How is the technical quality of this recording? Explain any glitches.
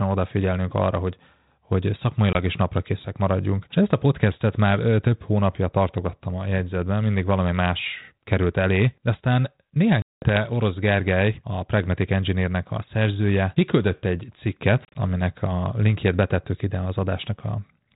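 The recording has three dropouts from packet loss on an ADPCM call. At 2.33 s, after "odafigyelnünk arra hogy hogy", there is a 20 ms hole. At 10.02–10.37 s, after "elé de aztán néhány", 200 ms are missing. At 14.85–14.99 s, after "a szerzője kiküldött egy", about 70 ms drop out in short bursts, the longest 30 ms. Each time, lost packets are filled with silence, and the decoder's predictor and step size fall out of step with the sender's. So each sharp gap is followed by slightly distorted speech that settles within tens of milliseconds. The light band-limited graininess of G.726 ADPCM, which fits 32 kbit/s, remains in the background.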